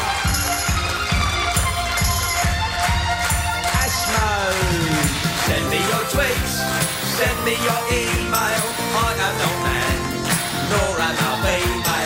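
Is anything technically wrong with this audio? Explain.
No, nothing technically wrong turns up anywhere in this audio, so there's nothing here to flag.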